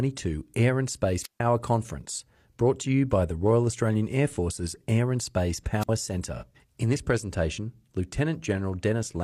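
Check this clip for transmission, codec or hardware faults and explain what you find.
Two kinds of fault appear in the speech: wireless microphone squelch dropouts and an AAC frame loss with concealment.

Wireless microphone squelch dropouts occur at 1.22 to 1.40 s and 5.80 to 5.89 s. The radio link fades, and the receiver's squelch shuts the output. Hiss rises briefly, then near silence lasts about 147 ms and 56 ms. The voice then returns.

AAC frame loss with concealment occurs from 6.36 to 6.44 s. About 43 ms of audio is missing, which fits a single lost frame. The decoder rebuilds it from the previous spectrum, so the gap is heard as a short smeared, phasey patch.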